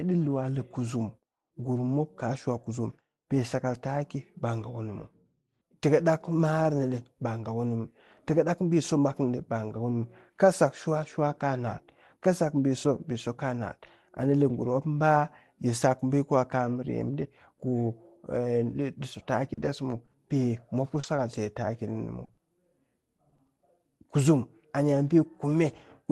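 It's a speech recording that went over a call path, and from about 19.53 to 23.63 s it breaks up with repeated packet loss, giving that robotic sound. There are seventeen short holes in that stretch, none longer than 40 ms, adding up to roughly 370 ms, about 9% of the span. Each gap gets papered over by stretching the preceding sound, so you hear a choppy sound with bits dropped, and about a tenth of a second sounds rebuilt rather than real. The call codec itself sounds like Opus at a modest rate, something like 32 kbps, with the top end stopping around 12 kHz.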